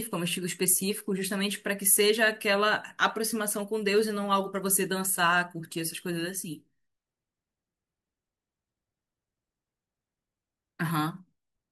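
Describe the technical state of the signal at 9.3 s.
At 9.3 s the signal is intact, with no audible technical fault at that point in the speech.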